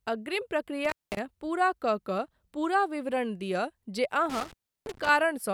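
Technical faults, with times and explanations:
0.85–1.19 s, intermittent contact. The speech cuts out for about 0.2 s just before "पूरा कऽ कऽ पूरा". Crackle marks both edges. A loose connection briefly opened, leaving faint hiss.
4.30–5.09 s, intermittent contact. The sound drops for about 0.33 s between crackling edges. The cable or plug opened again, so faint hiss remained.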